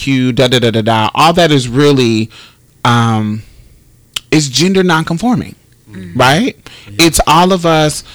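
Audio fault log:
Throughout, hard clipping: harsh fuzz on all loud speech; peaks overdriven about 15 dB are cut flat, roughly one sample in twenty, adding high harmonics.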